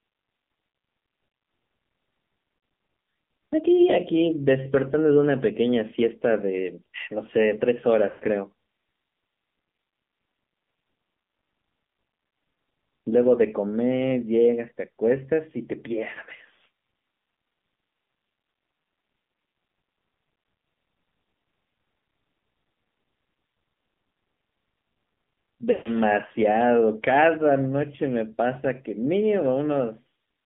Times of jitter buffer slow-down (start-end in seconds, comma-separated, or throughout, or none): none